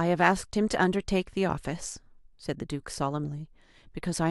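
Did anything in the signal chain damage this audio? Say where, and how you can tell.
Yes, at the codec stage, where the decoder let through a few corrupt frames. You get a brief glitch at 1.50 s and another at 3.24 s. Each is a few milliseconds of misplaced energy, about -20 dBFS for the first and quieter, around -30 dBFS, for the second. Bits got flipped in the compressed data and the decoder played those frames anyway, reading wrong gains or codes and putting energy at the wrong frequencies.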